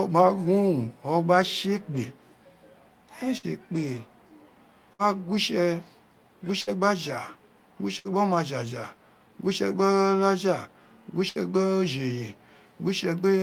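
Bursts of packet loss at 3.37, 4.93, 6.61, 7.99 and 11.29 s each leave about 60 ms concealed: the receiver stretches the last sound into a fading buzz or hiss, then the speech resumes about 60 ms further on. Unlike a plain dropout, the gap isn't silent.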